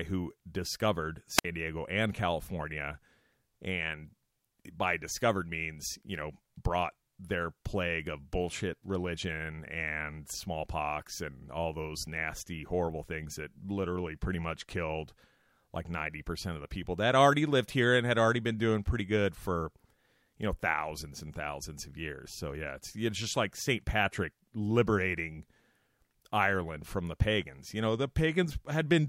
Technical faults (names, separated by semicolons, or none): wireless microphone squelch dropout